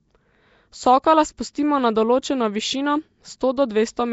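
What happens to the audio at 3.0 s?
Like the rest of the clip, the speech at 3.0 s sounds hissy, smeared and underwater, with nothing above 7.7 kHz. That's likely Nellymoser compression dropping weak bands and filling them with noise.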